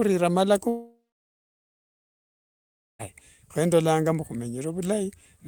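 From 0.69 to 3.01 s, likely a long network dropout: a fading buzz gives way to about 2 s of silence, and speech resumes at "kho ndolanga mbu" with the gap skipped, not delayed.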